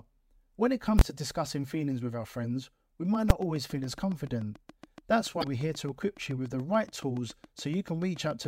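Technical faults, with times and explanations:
0.99 to 1.01 s and 3.30 s, invalid numbers at full scale: right after "when it" a 21 ms block (fits a 1024-sample buffer) slams to one extreme value and cuts out before "to discussing feelings with". At 3.30 s a shorter block (fits 256 samples) gives one sharp bang.
3.15 to 8.46 s, train of clicks: after "with our friends we" a steady ticking starts at about 7 per second, roughly forty clicks, about as loud as the speech and present in the pauses too. The likely cause is interference or a faulty connection injecting the same pulse repeatedly.
5.40 to 5.44 s, damaged data in a compressed stream: a brief glitch of about 46 ms where the decoder hit corrupted frames, misread them and lost sync until it found the next valid frame header.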